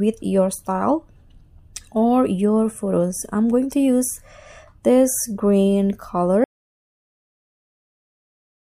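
At 6.44 s the sound cuts off abruptly into an audio dropout to silence lasting to the end, likely a lost input link; unlike a fade or gate, no room tone remains.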